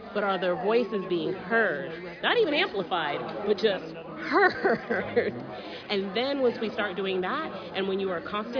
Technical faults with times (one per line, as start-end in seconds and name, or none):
none